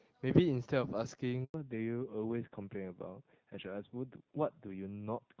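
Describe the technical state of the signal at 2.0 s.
At 2.0 s the call has already undergone a fallback to narrowband, which began at 1.54 s and lasts to the end. The link has dropped from the wideband HD Voice codec, whose earlier sound fits AMR-WB at 12.65 kbit/s, to an older narrowband codec that fits AMR-NB at 7.4 kbit/s. Because narrowband coding carries nothing above 4 kHz, the speech loses its upper range here and sounds duller, boxier and rougher.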